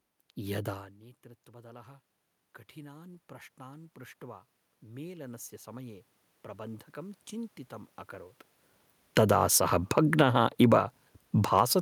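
From 2.74 s to 8.4 s the automatic gain rising fault appears. The input level fell by about 22 dB, and the gain control answered by climbing about 9 dB over nearly six seconds. The speech and the room noise grow louder together, and that shared swell is the clue that separates it from a talker moving closer, where only the voice would change. The talker's own shift near 8.5 s is the kind of change where the background stays put.

At 9.01 s automatic gain falling begins. The gain sinks by about 6 dB until 10.4 s, so the sound starts too loud and then settles lower with its background. From 9.41 s to 11.1 s a second automatic gain rising overlaps it, lifting about 3 dB.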